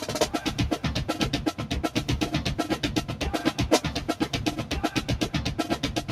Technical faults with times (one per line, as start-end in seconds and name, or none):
0.00-6.12 noise suppressor applied to music or sounds